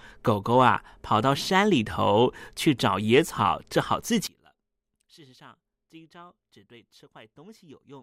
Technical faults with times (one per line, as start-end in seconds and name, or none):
4.27-8.03 one channel inverted